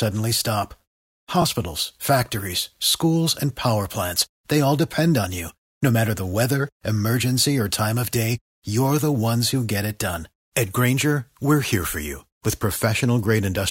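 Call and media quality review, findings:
Repeated buffer at 1.42 s: short click-like stutter in the speech. Output-side underrun; new audio arrived late, so the device replayed the last 20 ms buffer once, with a hard join. About 20 ms of audio lost. Unlike a dropout, no silent gap.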